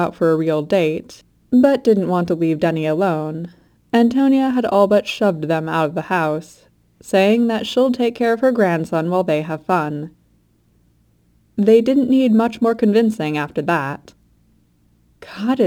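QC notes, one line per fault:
Throughout: crude rate conversion. Samples were repeated to go from 44.1 kHz to 48 kHz without filtering, leaving a gritty inharmonic fizz about 30 dB down, following loud passages.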